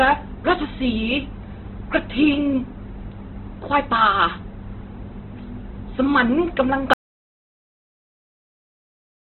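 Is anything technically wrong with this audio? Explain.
Yes, there are two problems, one running through the whole clip and one at the end.

From the start, the speech sounds heavily squeezed, which points to Opus compression, most likely at a very low rate of around 12 kbps in its music-style CELT mode. At that rate the encoder can't afford detail, so it fills bands with noise or folded copies of lower ones. The result is grainy, rough texture on the voice. The bandwidth has collapsed to narrowband, with nothing above about 4.2 kHz, so it's muffled and phone-like too.

Then at 6.94 s the audio drops out to silence and stays dead right through to the end at 9.30 s. It's plain silence, with no room tone or hiss underneath, so it sounds like the input went away rather than someone going quiet. The likely cause is a lost input, such as a disconnected device, a failed link or an accidental mute, with the recorder still writing silence. 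Whatever came after that point is gone.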